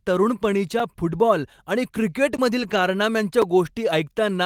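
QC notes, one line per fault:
0.80 s, 2.37 s and 3.42 s: block of digital silence. The sound dropped straight to silence and back with no fade. The 5 ms holes at 0.80 s and 3.42 s, which fit a 256-sample buffer, tick, and the 16 ms hole at 2.37 s is just long enough to be more than a tick.
2.59–2.81 s: lost packet rebuilt from error correction. Packets covering 120 ms went missing, which fits six 20 ms frames. The decoder played the low-bitrate copies carried in the packets that followed, so there is no gap, but the speech turns rougher and noisier.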